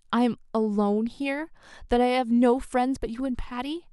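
No technical faults can be heard anywhere in this short speech recording; the signal holds steady and intact throughout.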